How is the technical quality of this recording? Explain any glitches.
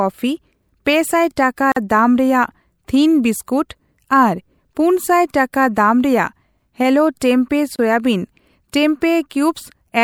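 The speech is interrupted twice by a gap at a join of encoded pieces: at 1.72 to 1.76 s, about 46 ms, right after "ᱯᱮ ᱥᱟᱭ", and at 7.76 to 7.79 s, about 29 ms. The audio appears to have been encoded in separate sections and spliced without trimming, so each section's leading encoder delay and padded final frame survive as dead air. You hear a brief hole with smeared edges, then the speech picks up exactly where it left off.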